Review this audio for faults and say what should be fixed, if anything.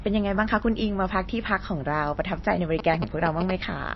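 A starved perceptual encoder, likely MP3 compression at a bitrate around 28 kbps, has cut everything above 5.8 kHz and switched weak frequency lines on and off between frames throughout, so the speech sounds dull, watery and swirly, with smeared consonant attacks. Encode from the original at a higher bitrate, or use a lossless format.

A nearby 2G phone exchanging signalling bursts with its network was picked up and rectified by the audio circuit, producing GSM signalling bursts from 2.79 to 3.51 s: a galloping ticking buzz at 217 Hz, only slightly quieter than the speech. Keep mobile phones well away from the microphone, cables and recording equipment, or switch them to flight mode.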